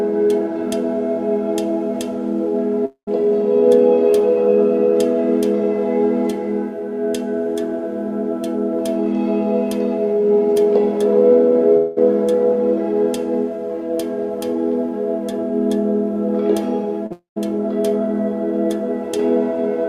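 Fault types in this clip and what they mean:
Long network dropout: At 2.85 to 3.09 s, 11.77 to 11.98 s and 17.12 to 17.38 s, the sound breaks off and the last moment carries on as a fading continuation, ending in about 100 ms and 130 ms of silence in the first and third gaps but never reaching silence in the second. This is likely a network stall of roughly 220, 200 and 240 ms, with the untransmitted audio gone when playback resumes.
Short concealed packet loss: At 17.06 to 17.12 s, just before the third dropout, about 40 ms of audio never reached the decoder in time. The receiver covered the hole by extending the preceding sound for about 38 ms and blending it back. The result is a brief smear where that stretch of sound is replaced by a stand-in, and the long dropout then follows directly.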